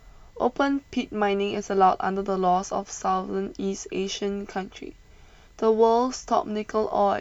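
Speech carrying a faint USB whine throughout: a fixed 1 kHz tone, strongest at 2 kHz, roughly 45 dB down, pitched far above mains hum's 50 or 60 Hz.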